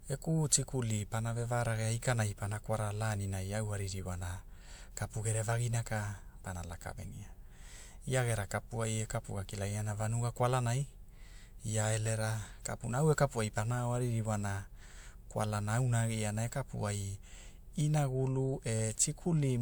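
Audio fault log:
No faults can be heard in this speech recording. There is nothing here that calls for an entry in the log.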